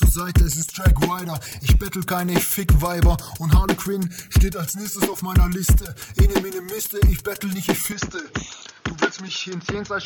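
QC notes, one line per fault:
7.92–10.06 s, input switched to a poorer device: at 7.92 s the sound abruptly turns dull and boxy with no gap at the change, and stays that way to the end. Nothing above 6.9 kHz survives, the level falls by roughly 10 dB, and a new background noise sits roughly 30 dB under the signal. This is likely a mid-recording swap to a narrower-band microphone or headset path with its own tone, gain and noise.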